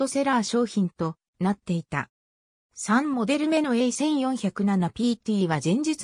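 No dropouts, glitches, distortion or level problems can be heard anywhere in the audio.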